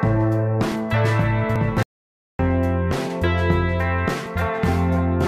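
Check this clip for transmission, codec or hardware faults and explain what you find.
Two kinds of fault are present: three brief discontinuities and one stretch of total silence.

At 0.72 s, 1.56 s and 4.26 s the sound jumps forward. Each is likely a dropped buffer (overrun), a block of only a few milliseconds overwritten before being read. Unlike a dropout, nothing goes quiet; the two sides butt straight together.

From 1.83 s to 2.39 s the sound cuts to dead silence for about 565 ms, then resumes mid-flow. This is an audio dropout to silence, likely from the input briefly disappearing while silence was recorded. Even the background tone vanishes, which separates it from the overruns.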